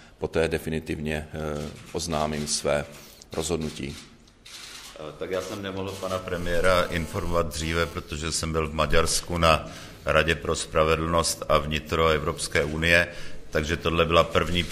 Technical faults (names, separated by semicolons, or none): GSM phone buzz